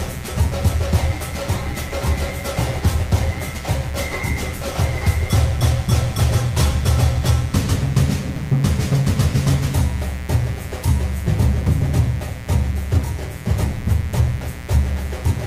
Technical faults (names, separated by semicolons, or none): mains buzz